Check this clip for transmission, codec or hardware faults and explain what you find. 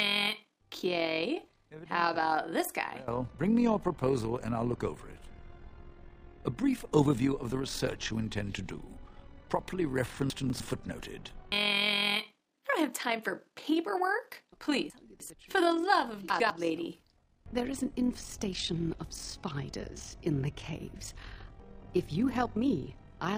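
Two faults stand out, one running the whole way through and one popping up three times.

First, there's overlap-add ripple across the entire clip. The sound was chopped into windowed frames and stitched back with an overlap that doesn't sum to a steady gain, so the level swings by about 6 dB around 40 times a second, giving a rough tremolo.

Second, chunks out of order at 10.3–10.6 s, 14.9–15.3 s and 16.3–16.5 s. In each spot a 100 ms chunk got delivered late and plays after the ones meant to follow it, by two, three and one chunk respectively. Nothing goes missing, but you hear a brief jumbled stretch.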